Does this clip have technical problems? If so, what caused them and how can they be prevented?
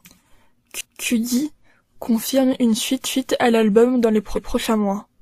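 Yes. There are overlapping chunks at 0.81–1.06 s and 3.06–3.31 s: 250 ms of speech plays twice at joins spaced 2 s apart, because each chunk starts before the last one ended. To prevent it, make chunk boundaries line up exactly, or trim the overlap when you stitch chunks together.

There are also repeated frames at 4.34–4.53 s: about 186 ms plays once more, which fits a small run of compressed frames being written twice. The decoder replays them as a stutter, and the clip gets 186 ms longer. To prevent it, check the sequence numbers when writing or sending frames, and drop any duplicates before decoding.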